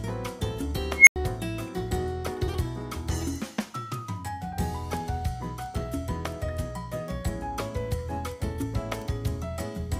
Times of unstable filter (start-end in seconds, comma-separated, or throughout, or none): 0.96-1.16